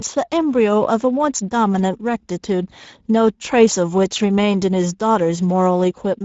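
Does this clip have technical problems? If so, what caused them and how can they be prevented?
Yes. Throughout the speech the sound is hoarse and noisy, with a grainy roughness on every syllable, and nothing reaches above 7.7 kHz. This is Speex codec damage. Speex is a CELP coder, and at this setting, which fits a bitrate of roughly 17 kbps, it has too few bits to describe the excitation signal accurately. The voiced sound comes out rasping. The top band above 4 kHz is only a shaped noise fill rather than real detail. To prevent this, record or transmit with a modern codec such as Opus at a higher bitrate, or raise the Speex quality setting.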